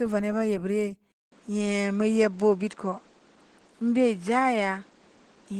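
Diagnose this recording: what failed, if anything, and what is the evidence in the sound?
The codec stage shows damage throughout. This is Opus voice compression running at 16 kbps in hybrid mode, so SILK's linear-prediction coder handles the band below 8 kHz and a CELT layer carries the fullband top, both in 20 ms frames. At this rate the excitation is coded coarsely, and the speech comes out plainly hoarse and slightly robotic. On a spectrogram the harmonics look smeared and grainy, and the region above 8 kHz appears patchy, changing from block to block at the 20 ms frame rhythm.

A second fault appears at the capture stage. At 1.12 s the signal drops out for about 200 ms. The sound then returns duller than before, and it stays that way to the end. It has nothing above 9.7 kHz and a new steady noise floor roughly 30 dB below the speech, while the level stays about the same. The likely cause is the input switched to a poorer device, one with a narrower band and its own noise. 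On the waveform, the switch shows as a flat gap. On the spectrogram, it shows as a hard ceiling near 9.7 kHz with a faint constant haze underneath.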